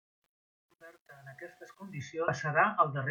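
From 0 to 2.02 s the speech fades in, and across that fade there is truncation distortion: the gain stage keeps only about 9 bits with no dither, so the low-level waveform collapses into coarse steps. It is grittiest up to 1.70 s.

At 2.24 to 2.28 s, compressed frames are skipped. The audio jumps ahead by roughly half a second, which fits about ten dropped frames of 42.7 ms each.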